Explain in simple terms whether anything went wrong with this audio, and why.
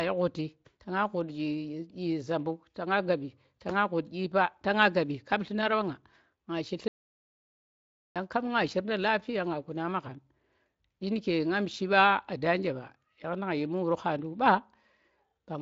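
Yes, one thing went wrong: an audio dropout to silence. At 6.88 s the speech cuts out mid-flow and doesn't come back until 8.16 s, so about 1.3 seconds is simply missing. The gap is dead silent, with no background hiss or room sound at all, which likely means the input was lost for a moment, maybe a loose connection or an accidental mute, while the recorder kept writing nothing. Whatever was said in that stretch is gone. The mild, slightly narrow phone-call sound, from the Speex voice codec, is normal here.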